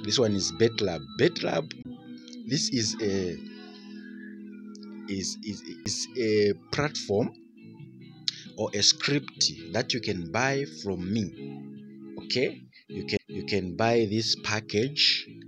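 The audio has three CD skips, at 1.82 to 1.85 s, at 5.85 s, and at 13.17 to 13.19 s. Each is a short tick with a mute of roughly 10 to 20 ms. After each one, the sound picks up from a different place. The laser was likely knocked or hit a flaw and jumped to another turn of the disc's spiral. The player then resumed from that new position.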